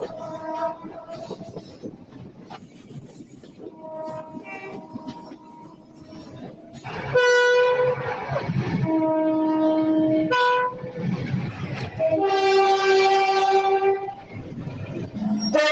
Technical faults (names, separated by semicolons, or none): noise suppressor applied to music or sounds; sound cut by the noise suppressor